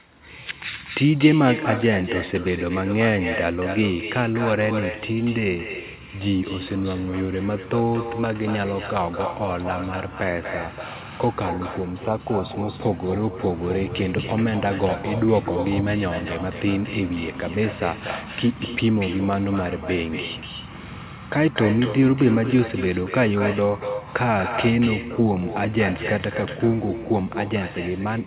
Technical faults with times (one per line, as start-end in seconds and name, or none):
0.00-28.27 echo with no canceller